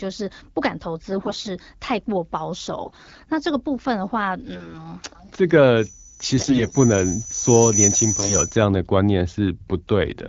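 Short stretches of hoarse, scratchy, gargly speech at 1.10–1.49 s, 2.83–3.28 s and 4.53–4.75 s are AMR bit errors. On a weak link the lightly protected bits of each frame arrived flipped while the checksum still passed, so pulse positions, pitch, gain and spectrum details decode wrongly. The worst stretches point to error rates of roughly one bit in seven.

From 5.76 s a thin 6 kHz tone swells over about two seconds to about 10 dB above the speech, then stops at 8.66 s. This is loudspeaker feedback squeal: the microphone picked up its own loudspeaker, and the loop gain at that frequency exceeded one. Two more bursts of gargly bit-error distortion fall inside the squeal, at 6.38–6.72 s and 8.19–8.37 s.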